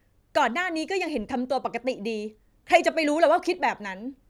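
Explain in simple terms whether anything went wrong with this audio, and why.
Nothing went wrong here, so there's no problem to point to anywhere in the recording.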